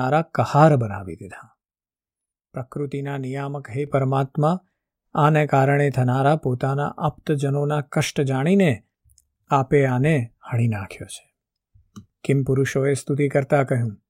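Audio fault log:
1.34–3.87 s, sudden gain jump: the speech drops by about 8 dB in a single step at 1.34 s and returns just as abruptly at 3.87 s. The background noise falls and rises by the same amount at the same instants, so the level change was likely applied to the whole signal digitally, without a ramp. That shared, instantaneous step is what separates it from a fade, a talker moving off-mic, or compressor action, which would glide.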